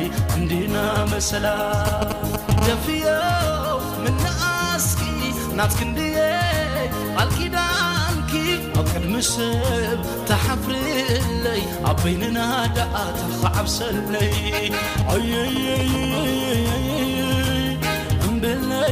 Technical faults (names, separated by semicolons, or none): GSM signalling bursts; GSM phone buzz